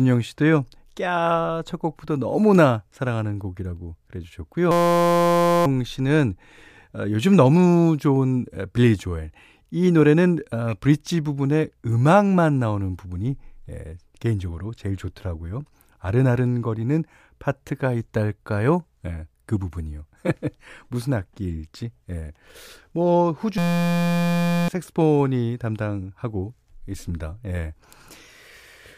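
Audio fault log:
4.71–5.66 s and 23.58–24.68 s, system hang loop: the output freezes into a steady 172 Hz buzz. A 5.8 ms fragment repeats exactly, which fits a 256-sample ring buffer cycling while the system hung, so each event replaces about a second of audio.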